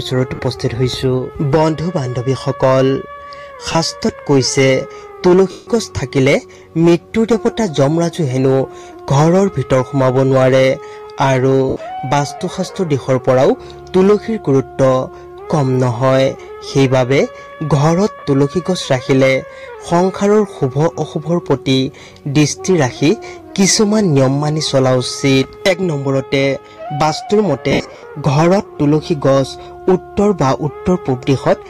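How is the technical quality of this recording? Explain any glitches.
The recording has six dropouts from lost LE Audio frames: 0.35 s (40 ms), 3.72 s (30 ms), 5.51 s (160 ms), 11.69 s (70 ms), 18.19 s (40 ms), and 27.71–28.03 s, where 220 ms of losses are scattered over about 320 ms, the longest gap around 70 ms. The LC3 decoder fills gaps by repeating the last spectrum with randomised signs, so tonal content smears into noise; the 160 ms gap audibly fades toward silence.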